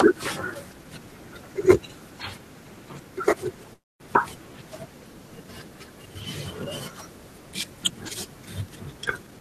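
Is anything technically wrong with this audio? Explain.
Yes, the speech has two faults, both tied to packet timing on a call.

Call audio freeze, 3.73 to 4.02 s: the last sound is held as a brief buzz that fades, then about 220 ms of silence, before the speech resumes where it stopped. About 266 ms of filler is inserted and nothing is lost, so everything after it runs about 266 ms later. The likely cause is packets stalling in transit, leaving the receiver's jitter buffer empty until they arrive.

Jitter buffer speed-up, 9.23 to 9.41 s, running to the end of the clip: the speech rushes forward at about 191% of normal speed with its pitch unchanged, sounding clipped and hurried. The receiver's buffer had built up more audio than its target, and it trimmed the excess by cutting out many short slices, each one or a few pitch periods long, back to back. Around 150 ms of audio is removed within this stretch.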